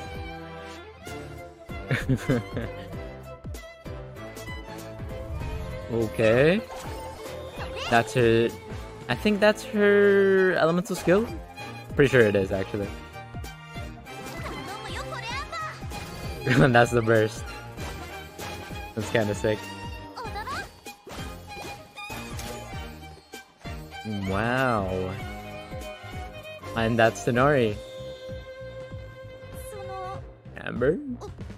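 No technical faults can be heard anywhere in the audio.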